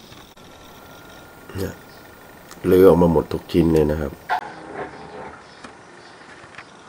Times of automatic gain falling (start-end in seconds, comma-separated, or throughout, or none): none